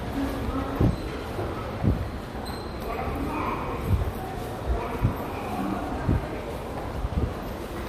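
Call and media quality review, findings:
No faults found in this audio; nothing to log.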